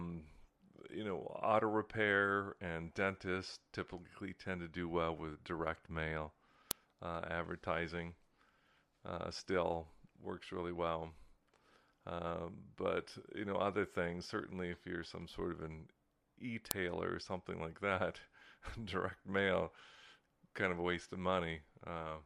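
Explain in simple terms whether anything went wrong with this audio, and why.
A file header played as audio causes sharp clicks at 6.71 s, between "well with direct mail" and "uh advertising", and again at 16.71 s. The speech was joined from 10-second pieces, and each piece's header data was played as sound, producing a loud snap.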